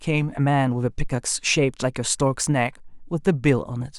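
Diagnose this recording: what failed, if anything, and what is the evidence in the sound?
The converter failed. From 2.22 s to the end of the speech, a faint hiss and roughness rides on the signal, strongest on loud and bright sounds and absent in pauses. That is sample clock jitter: a timing wobble of around a microsecond shifts each sample, leaving error about 40 dB below the signal.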